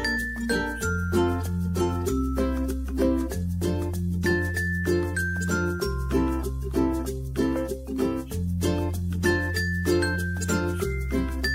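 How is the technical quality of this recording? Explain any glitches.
No glitches can be heard anywhere in the recording. The audio stays steady throughout, so there is nothing to explain.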